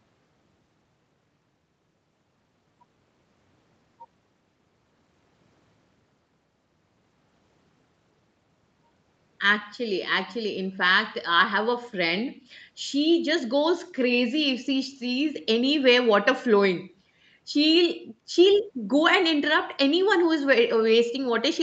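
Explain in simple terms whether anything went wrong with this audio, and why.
Nothing went wrong here.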